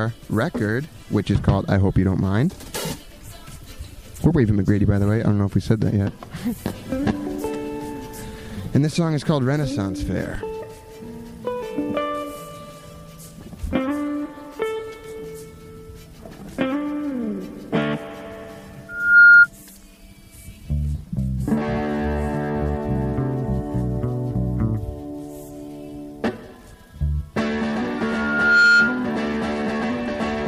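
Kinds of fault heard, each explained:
Loudspeaker feedback squeal: microphone re-amplifying its own loudspeaker, so a 1.4 kHz tone swells at 18.89 s and 27.98 s; spectrogram shows one bright horizontal line, waveform envelope ballooning.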